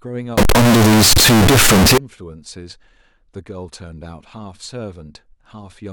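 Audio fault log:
0.38 to 1.98 s, float read as integer: the speech suddenly turns into a loud, harsh, nearly square wave at an almost fixed, high level, with the background noise as loud as the talker. The pitch still comes through. It sounds like 32-bit float samples likely being read as 32-bit integers, so the sign and exponent bits set the level.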